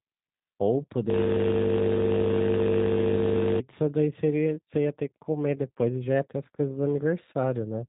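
From start to end the speech carries the plainly audible damage of the G.729 codec, which fits an 8 kbit/s VoIP stream. Nothing passes above 3.8 kHz, and the voice sounds rough and slightly synthetic because it is rebuilt from a vocal tract filter, a pitch predictor and a few pulses per frame, not carried as a waveform. That buzzy, modelled texture sets it apart from a simple low-pass filter, which would only dull the sound.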